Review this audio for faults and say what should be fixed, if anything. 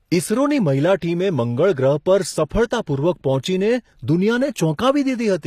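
The treble of the speech sounds synthetic and gritty throughout, with nothing above 14.9 kHz, likely from HE-AAC compression at a low bitrate around 24 kbps, rebuilding the high band from copied lower bands. A spectrogram shows smeared, repeated-looking upper bands ending abruptly. Encode at a higher bitrate, or with plain AAC, to prevent it.

Pre-echo appears at 1.00–1.02 s and at 2.49 s, where quantisation noise spread across a transform block leaks ahead of sharp onsets as a brief hiss of about 20 ms and 16 ms. The waveform shows fuzz before each attack. Higher bitrates and shorter transform blocks prevent it.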